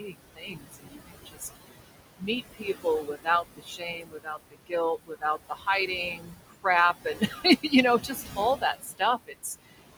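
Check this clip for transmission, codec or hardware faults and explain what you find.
The faults here come from noise suppression: the suppressor processes the whole clip, and several stretches of speech are cut along with the noise.

Noise suppressor artifacts run throughout. The suppressor estimates the steady background in each frequency band and attenuates it frame by frame, here by about 20 dB. The room noise, sitting only about 9 dB below the speech, therefore drops away in the gaps and returns beneath each phrase.

Speech cut by the noise suppressor occurs in five stretches: 0.0–1.57 s, 2.19–4.73 s, 5.04–6.66 s, 7.05–7.72 s and 8.03–9.79 s. Because the speech is close in level to the noise, the suppressor misreads quieter parts of it as background and pulls them down, by about 22, 20, 21, 13 and 19 dB at the deepest points. Within these stretches, roughly a second, a second, half a second, a third of a second and under a second of material sounds swallowed or faint.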